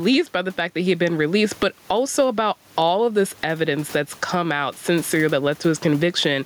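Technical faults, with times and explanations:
Throughout, gain pumping: the input gain was likely set far too high for the microphone, leaving a fast limiter or compressor to haul it back down on every loud syllable. The level swings by roughly 15 dB, and the room noise sits about 37 dB below the speech. Loud and quiet passages are pressed close together, giving the speech a squashed, breathing quality.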